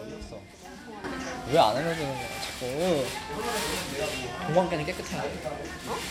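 At 1.04 s there's a sudden gain jump: the whole sound, background noise included, leaps up by about 11 dB in one step and stays there to the end. It's likely a gain change applied instantly, with no ramp to smooth it.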